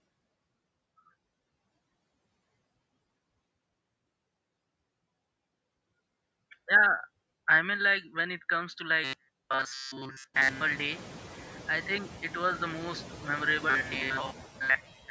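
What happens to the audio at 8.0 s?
Noise suppressor artifacts are present at 8.0 s, as they are across the whole clip. The suppressor estimates the steady background noise and pulls down each frequency band it judges to be noise, frame by frame, by about 20 dB. The residue between phrases sinks away and comes back under the speech, within the call band, which stops at 8 kHz.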